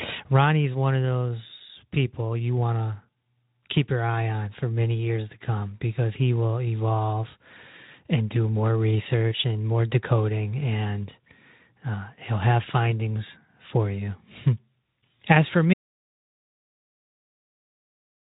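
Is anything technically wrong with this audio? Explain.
Yes. At 15.74 s the speech stops abruptly and the rest of the clip is an audio dropout to silence that lasts to the end. The most likely cause is that the input was lost, through a disconnected device, a broken link or a mute, while the recorder kept writing silence. Unlike a fade-out or a noise gate closing, the cut is instant and the gap is silent with no room tone. The speech's light Speex coding, with nothing above 3.8 kHz, stops along with it.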